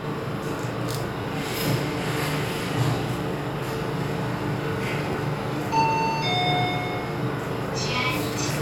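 Throughout the clip, every sound is doubled. This is channel delay (doubling). One channel runs about 40 ms behind the other, and the two are summed to mono. The late copy arrives at equal level, so each sound gets a tight slap echo.

At 1.22 to 1.24 s, a repeated buffer causes a brief buzz. The same tiny slice plays three times in a row, with hard joins. At 5.13 s the slice repeats once, as a short click. The repeat length points to a 10 ms buffer. Fresh audio arrived late, so the device replayed the last piece instead.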